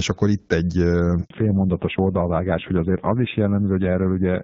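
At 1.24 s there is a handover gap. The call switched from one network to another, and no speech frames came through during the change. The speech cuts out within a few tens of milliseconds. Then there is silence for 60 ms, until about 1.30 s, when the new link begins carrying audio. Whatever was said in that moment is lost.

From 1.30 s to the end, there is a fallback to narrowband. Before this point the audio has the fuller HD Voice sound of the AMR wideband codec, with only light coding damage. After the switch, nothing above 4 kHz remains. The speech turns duller and more muffled. It also sounds rougher and grainier, which fits a drop to a low-rate narrowband codec around 5.9 kbit/s.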